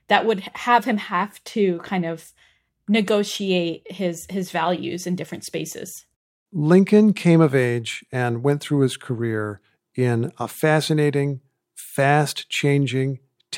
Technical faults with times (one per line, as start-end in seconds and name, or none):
none